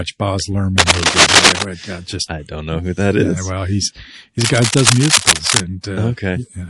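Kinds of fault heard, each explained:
MP3 compression: Likely a low-rate MP3 encode, which fits about 48 kbps, discarding treble and weak detail throughout, leaving a plainly audible watery, swirly smear.
Cable scratch noise: Likely a worn contact changing resistance as it moves, adding loud rustling bursts, roughly 5 dB above the sound, from 0.78 to 1.63 s and 4.41 to 5.61 s.
Pre-echo: The codec keeps long blocks across a sharp attack, spreading its noise forward, so a hiss rising about 19 dB fills roughly 23 ms before the onset at 5.83 s.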